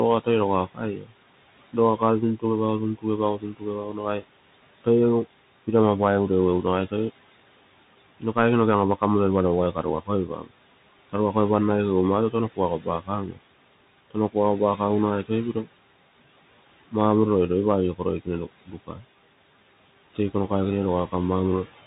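Throughout the speech, noise suppressor artifacts are present: the room noise, sitting about 18 dB below the speech, is pulled down by about 17 dB in the gaps and swells back under each phrase. On a spectrogram the noise floor pumps frame by frame, leaving patchy, fluttering residue between words.

Also throughout is the Bluetooth CVSD headset codec. Its one-bit, up-or-down coding, which fits a 64 kbps link, is plainly audible as granular hiss and scratchy sibilants. A spectrogram shows a hard ceiling with nothing above 3.8 kHz, and the waveform looks grainy.

Speech cut by the noise suppressor first appears between 0.24 and 5.68 s, where the suppressor mistakes parts of the speech for noise. It drops them by up to about 17 dB, for well under a second in total, so soft consonants and word endings sound swallowed. These show as sudden holes in the waveform envelope and faded patches on the spectrogram.

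The same cut returns from 8.03 to 11.35 s (up to about 18 dB, under half a second in total), from 12.31 to 15.66 s (about 17 dB, around half a second), and from 17.97 to 19.03 s (about 14 dB, a fraction of a second).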